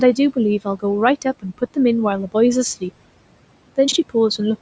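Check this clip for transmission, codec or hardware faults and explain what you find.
One transmission fault stands out: chunks out of order, between 3.88 and 3.96 s. A 40 ms chunk of audio was delivered or written one chunk late, so it plays after the chunk that should have followed it. No audio is lost, but the two 40 ms pieces swap places and create three hard joins. The speech briefly sounds garbled and jumbled, over a faint room noise about 20 dB below the speech.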